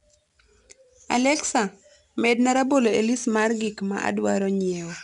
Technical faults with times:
0.00-5.03 4-bit ADPCM compression

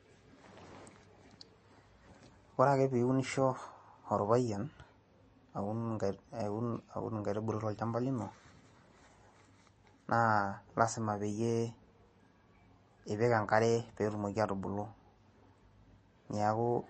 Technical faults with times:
0.00-16.89 MP3 compression

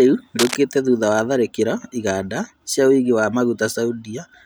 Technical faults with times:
0.39-0.55 cable scratch noise

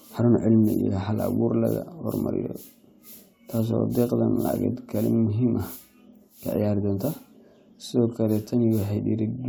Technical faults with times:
none

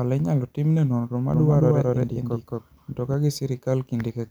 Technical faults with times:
1.34-3.14 doubled audio track

